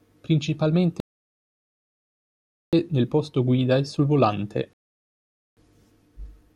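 At 1.00 s the speech halts in a rebuffering stall, the player having run dry of downloaded audio. Silence holds until 2.73 s, adding 1.73 s, then resumes on "nel posto guida e". A second stall follows "guida e sul volante", silent from 4.73 to 5.57 s, adding 0.84 s. Unlike a dropout, no syllable goes missing: the speech picks up exactly where it stopped, so the gaps only add time.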